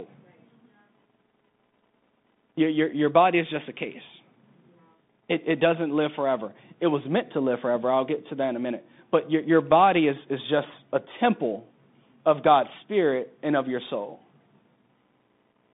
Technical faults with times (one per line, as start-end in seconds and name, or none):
0.00-15.73 Bluetooth CVSD headset codec